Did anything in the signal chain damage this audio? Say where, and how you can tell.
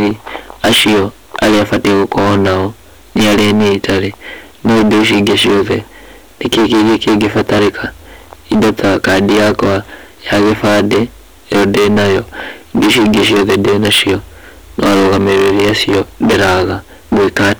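Yes. The speech carries a harsh, constant fuzz on every loud syllable from start to finish. That is hard clipping: the signal is driven about 24 dB beyond what a converter or gain stage can pass, so nearly a third of the waveform has its peaks sheared flat, spraying high harmonics.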